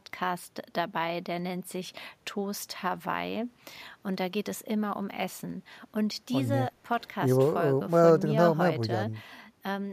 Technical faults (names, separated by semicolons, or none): none